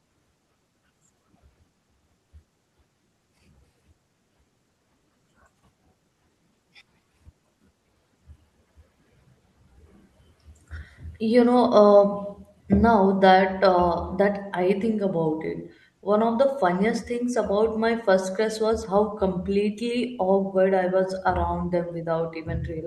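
No technical faults can be heard anywhere in the speech. It has passed through a call codec that adds its usual coding noise, with the top end stopping at about 12 kHz, which fits Opus running at a moderate bitrate of around 40 kbps.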